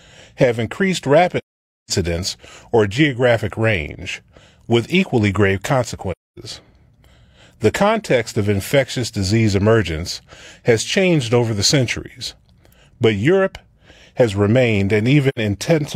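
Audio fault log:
1.37–1.91 s, 6.11–6.38 s, 15.28–15.39 s: AAC frame loss with muting. Speech drops to silence after "have increased", "range with equally grave" and "has remained", for about 512, 256 and 85 ms. Lost frames were decoded as zero spectrum. Overlapping windows fade each gap's edges.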